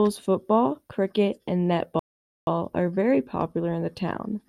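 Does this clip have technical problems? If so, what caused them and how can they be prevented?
Yes. The speech stops dead at 1.99 s and stays silent until 2.47 s, then picks up exactly where it left off. That is a rebuffering stall: the player exhausted its downloaded audio and had to pause until more data arrived. No content is dropped or repeated, but the gap adds about 0.48 s to the playback time. To prevent it, give the player a deeper initial buffer or use adaptive bitrate switching so downloads stay ahead of playback.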